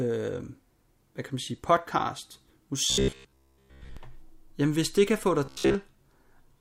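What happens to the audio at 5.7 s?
Around 5.7 s you're in the middle of a stretch of robotic sound from repeated short buffers, running from about 5.45 to 5.75 s. The speech collapses into a stiff, metallic buzz near 66.8 Hz that only loosely tracks the words. That's likely the player looping a roughly 15 ms chunk because fresh audio isn't arriving in time, so most of the real signal gets skipped.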